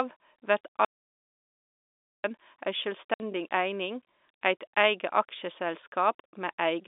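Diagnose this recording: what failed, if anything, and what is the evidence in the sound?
Audio dropout to silence, 0.85 to 2.24 s: about 1.4 s of silence with no room tone, likely an input or link loss while recording continued.

Packet loss filled with silence, 3.14 to 3.20 s just before "eining eit eige", and 6.20 to 6.24 s: hard-edged holes of 60 and 40 ms, fitting lost 20 ms network packets.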